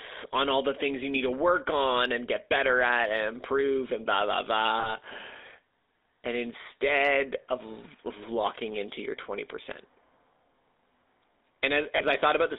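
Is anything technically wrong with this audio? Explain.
Yes. The speech has passed through the GSM full-rate codec throughout, and at two points lost GSM frames have been concealed.

GSM full-rate codec: the coder models the vocal tract and excites it with sparse, regular pulses, giving a buzzy, gravelly roughness. A spectrogram shows nothing above 3.7 kHz or below 300 Hz, which fits a 13 kbps full-rate line.

Lost GSM frames: at 4.80 to 4.92 s and 11.96 to 12.01 s the decoder replayed the last good frame's settings, heard as a brief metallic ring. The waveform shows a short repeated segment, which fits one and two missing 20 ms frames.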